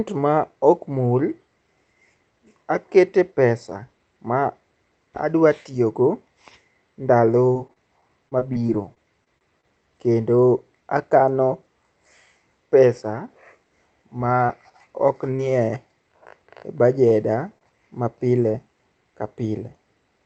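Repeated packet loss (robotic sound) runs from 7.53 to 9.65 s, ending just before "kendo akano". Over these two seconds, more than a dozen small holes open in the stream, none longer than about 29 ms. Each one is bridged by extending the previous sound before the next hole arrives, so about a tenth of the stretch is synthetic fill and about 180 ms of real audio is gone. The speech turns choppy.

Short concealed packet loss occurs at 14.47 to 14.50 s, 15.36 to 15.40 s, and 18.52 to 18.56 s, the last just after "ma pile". Each time, about 20 ms of audio never reached the decoder. The receiver filled the gap with a continuation of the preceding sound, pitched if voiced or noise-like if not, and then crossfaded back into the real signal. Each event is a brief smear or wobble, and a tiny piece of speech is lost.

Short stalls from a late packet occur at 17.08 to 17.12 s and 17.58 to 17.73 s, the second just before "ma pile". 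In each case the jitter buffer briefly ran dry because a packet arrived late. The last sound was stretched by about 17 ms and 29 ms respectively, and the audio then resumed from where it left off, so nothing is lost. Each stall sounds like a slightly overheld sound with a slight buzz or dip. After the longer stall, the receiver trimmed about 14 ms to catch back up.

Throughout the clip, the call codec limits the audio to about 8 kHz.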